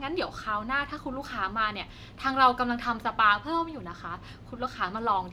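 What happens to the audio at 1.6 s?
Nothing goes wrong at 1.6 s: the speech runs on without a dropout, click or other fault at that point.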